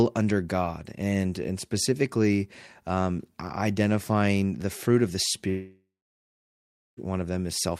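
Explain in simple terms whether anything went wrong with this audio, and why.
Something did go wrong. Right after "the fruit of the", at about 5.49 s, the speech cuts out until about 6.99 s, roughly a second and a half gone. That's a long network dropout, most likely the connection stalling so no audio got through. The player briefly stretched the last sound into a fading buzz or hiss, then about 1.1 s of near-silence followed. When the speech returns, it picks up further along, and whatever was said in that gap is simply lost.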